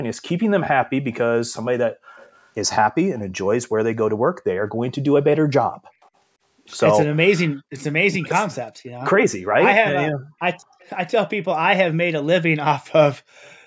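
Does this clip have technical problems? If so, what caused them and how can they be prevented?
Yes. Background gated by the echo canceller, 1.91 to 2.16 s: the room sound behind the speech drops away by up to about 40 dB for roughly a third of a second, then returns. While the far end's audio was playing through the loudspeaker, the canceller clamped the microphone hard and took the ambience with it. Gentler suppression with comfort noise, or a better-tuned canceller that needs less attenuation, would prevent this.

Echo leak, at 2.16 to 2.49 s, 3.15 to 3.21 s, 6.02 to 6.09 s, 10.79 to 10.9 s and 13.36 to 13.54 s: brief, faint copies of the speech trail in 226 ms behind it, roughly 30 to 35 dB below the main level. The likely cause is a loudspeaker on one side whose echo canceller left some of the pickup unremoved, sending it back down the line. Using a headset, or lowering speaker volume so the canceller can keep up, would prevent it.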